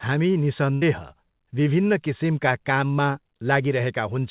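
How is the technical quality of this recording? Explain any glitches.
The recording has one glitch, a burst of packet loss, heard over audio that stops at 4 kHz, which points to a narrowband call codec such as G.711 mu-law.

From 0.74 to 0.83 s, a run of packets failed to arrive in time for playback. The receiver covered the hole by stretching the last sound it had for about 74 ms, fading it down as it went. When audio resumes, about 80 ms of the original sound has been skipped, so the speech jumps forward after a brief smeared, dying tail.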